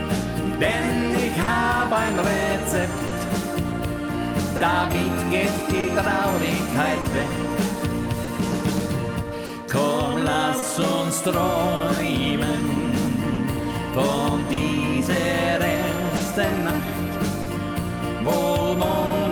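The audio carries two overlapping timing problems. Throughout, there's clock drift between sender and receiver: the sending clock runs roughly 3 percent slow, so the receiver's jitter buffer keeps draining. To keep playing, it stretches or repeats short bits of sound. That gives small, unevenly spaced hiccups for the whole clip. On top of that come scattered short gaps from about 1.43 s to 19.12 s, around fifteen of them, where packets went missing or arrived late. Each hole was papered over by extending the preceding sound, with the longest lasting around 40 ms and about half a second concealed in total, a few percent of that stretch. You hear them as brief ticks, smears or stutters dotted through the audio.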